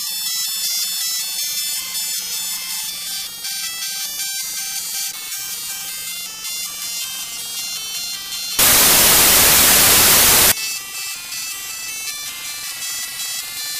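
Around 8.59 s the audio suddenly collapses into loud, harsh broadband noise that lasts until 10.52 s, a clear case of samples built from the wrong bytes. The reader is pairing bytes badly there, so the jittery low bits end up driving each sample's value.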